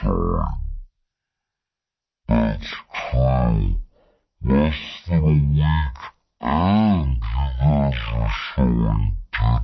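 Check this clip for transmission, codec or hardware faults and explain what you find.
A wrong sample rate fault runs through the whole clip. The speech plays at about 0.36 times its proper speed, which fits audio recorded at 44.1 kHz being played at 16 kHz without conversion. Pitch falls with speed, about 17.6 semitones lower, so the voice sounds deep, slow and dragging. On a spectrogram, formants and harmonics sit compressed into low frequencies, while the waveform's syllables stretch out nearly threefold.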